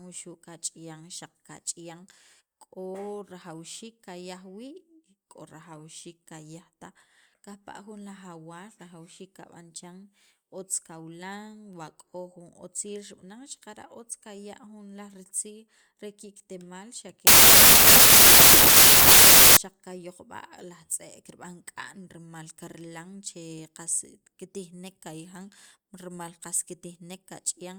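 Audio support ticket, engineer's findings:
Wrong sample width, 17.27–19.57 s: speech buried in loud harsh noise, fast and high-pitched at 1.33x. Fits packed 24-bit data read as 32-bit words. Words straddle sample boundaries, so few keep true top bits. Check reader format config.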